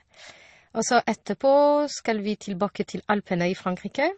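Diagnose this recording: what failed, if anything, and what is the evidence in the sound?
Codec stage. The speech carries two sets of compression artefacts at once throughout, and nothing is present above 9.6 kHz. This is likely transcoding between lossy codecs, consistent with an MP3 pass feeding Opus, both near 32 kbit/s. The second encoder spent bits re-coding the first one's damage, and the lower band limit stayed.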